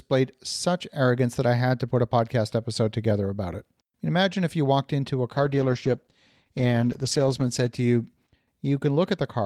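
At 5.32 s, after "you walked into a", a call bitrate drop sets in to the end. Coarser coding, pointing to roughly 64 falling to 15 kbps, leaves the speech rough and muffled.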